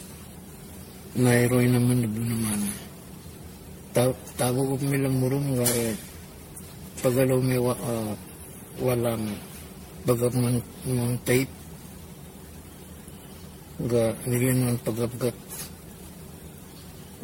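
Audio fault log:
Throughout: generation loss. The speech sounds swirly, smeared and hollow, with blurred attacks and nothing above 16.5 kHz. This likely comes from around ten successive MP3 passes at something near 64 kbit/s, each requantising on a shifted frame grid so noise and spectral gaps accumulate.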